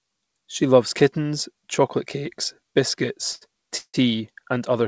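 A short stall from a late packet occurs at 3.35 to 3.43 s. A packet missed its playout deadline and the jitter buffer ran dry, so the receiver held the last sound for about 60 ms until the packet turned up, then carried on from the same point. Nothing is lost, but the sound at that moment is drawn out with a faint buzzy sustain, and everything afterwards plays 60 ms later.

A call audio freeze follows at 3.77 to 3.96 s. The sound stops moving forward for about 163 ms: the last fragment is extended as a fading buzz that sinks into silence for roughly the final 60 ms, and then the audio resumes exactly where it paused, with nothing skipped. The likely cause is packets held up in transit, leaving the jitter buffer empty. The gap adds another 163 ms of delay. Across the clip the band stops at 8 kHz, consistent with a wideband G.722-style call codec.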